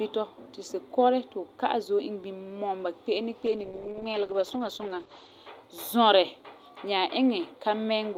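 Speech with a call bitrate drop from 3.46 to 5.37 s: the top end collapses from 20 kHz to 8 kHz and the voice turns watery and coarse, consistent with the encoder falling from about 48 to 11 kbps. Unlike packet loss, nothing drops out; the sound stays continuous and recovers.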